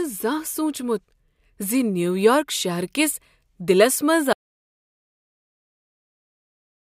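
At 4.33 s, right after "شہر کس دِلس منٛز", the speech cuts off abruptly into dead silence with no room tone, lasting to the end of the clip. This audio dropout to silence likely came from lost input while the recorder kept writing silence.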